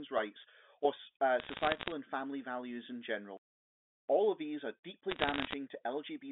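Bit errors on the digital phone line corrupt single samples at 1.4–1.92 s, after "rights or uh", and 5.1–5.53 s, after "of these are", producing bursts of sharp crackling ticks.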